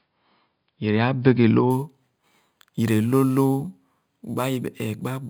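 From 1.70 s to the end, the speech carries imaging from sample-and-hold upsampling. The rate was raised by holding each sample with no smoothing filter, which fits an original rate near 11 kHz. Mirrored copies of the speech spectrum appear, the first between about 5.5 and 11 kHz at about 23 dB below the signal, heard as a bright metallic fizz tracking loudness. A spectrogram shows inverted harmonic patterns above 5.5 kHz, and the waveform shows small staircase steps.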